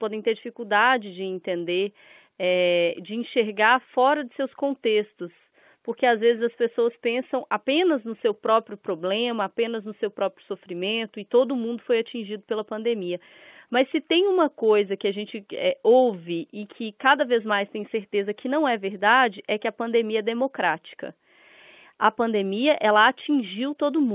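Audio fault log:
No faults can be heard anywhere in the speech. It arrives over mu-law G.711 telephone coding, which holds everything below 4 kHz and leaves only a faint noise about 38 dB under the speech that rises and falls with its level.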